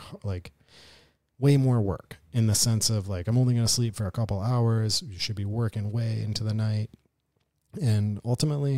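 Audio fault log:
No faults are audible anywhere in this speech recording.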